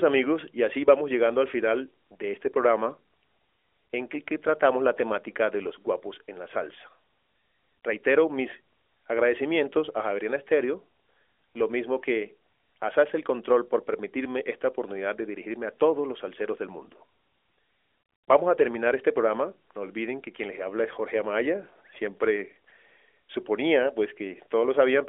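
There are no technical faults to describe in this speech clip.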